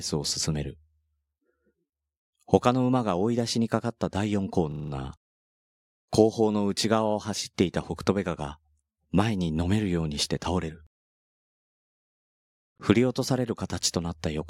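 From 4.72 to 4.92 s there is a system hang loop: the driver or computer stalled while the audio hardware kept replaying the same ring buffer. A 40 ms slice of speech repeats exactly five times, giving a rapid rattling stutter at 25 Hz, and no audio seems to be lost. On a waveform the same 40 ms shape appears copied end to end; a spectrogram shows identical vertical slices tiled every 40 ms.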